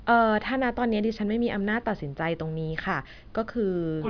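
Speech recording, with nothing technically wrong with it.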